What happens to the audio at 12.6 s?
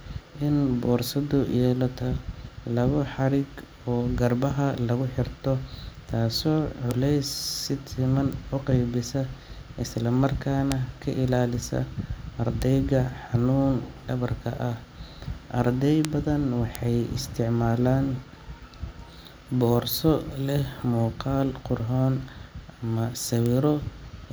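At 12.62 s there is a single sharp tick, a brief broadband click that sits on top of the speech without any relation to it and peaks at about -11 dBFS. This is a bit error spike: one flipped bit in the stored or transmitted data threw two consecutive samples off by a power-of-two step before the waveform snapped straight back, so the energy lands across the whole spectrum as one instant snap.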